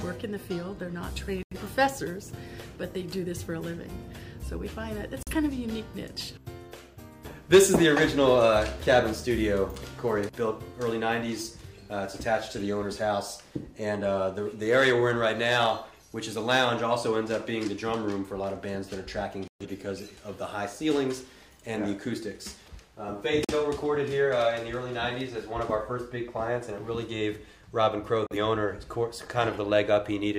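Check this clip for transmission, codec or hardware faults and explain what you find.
The clip has a digital broadcast dropout fault, with five brief mutes. The sound cuts out at 1.43 to 1.56 s, 5.23 to 5.32 s, 19.48 to 19.66 s, 23.45 to 23.54 s and 28.27 to 28.36 s. Each time, the receiver stopped getting valid frames and muted. The audio lost in each gap amounts to one to three frames of about 43 ms each. The missing audio never comes back.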